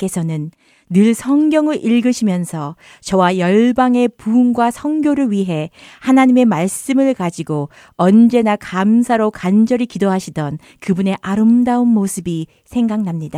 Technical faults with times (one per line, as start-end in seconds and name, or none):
none